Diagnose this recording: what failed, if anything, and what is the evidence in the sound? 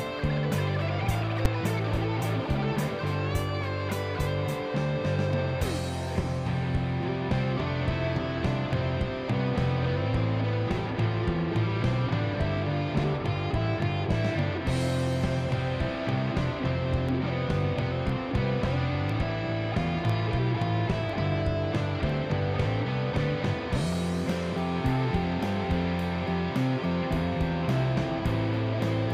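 Invalid numbers at full scale at 1.45 s: a single loud bang lasting about 5.8 ms, which fits one 256-sample processing block producing garbage that clamped to full scale.

Periodic USB or driver dropouts from 17.09 s to 22.10 s: about seven brief ticks, one every second, where roughly a millisecond of audio drops to silence as something blocks the driver.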